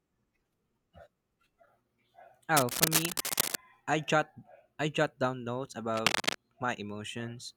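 A worn cable, connector or control was likely being moved during this speech recording, making its contact resistance jump around and inject cable scratch noise. It arrives as dense, uneven bursts of scratching and rustling, about as loud as the speech itself, first from 2.57 to 3.56 s just before "I jot I jot", then again from 5.94 to 6.35 s right after "I jot down notes".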